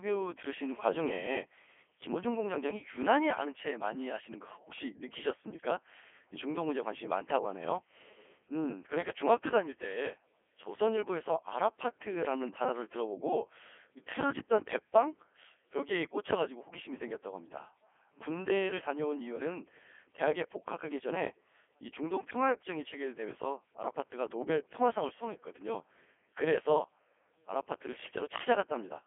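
Throughout, the speech sounds robotic and buzzy, squeezed into a 300 Hz to 3.4 kHz telephone band with nothing above 3.6 kHz. This is Codec 2 vocoder damage, consistent with its top 3.2 kbit/s mode: only pitch, voicing, energy and spectral envelope survive, and the decoder rebuilds the voice from sine waves.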